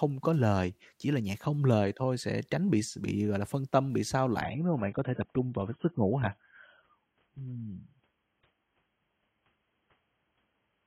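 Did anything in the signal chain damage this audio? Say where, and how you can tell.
Yes. From 4.41 s, right after "phân tâm bị xao", the speech turns dull and smeared with nothing above 3.9 kHz: an adaptive stream at a lower bitrate, consistent with a 16 kbit/s network fallback.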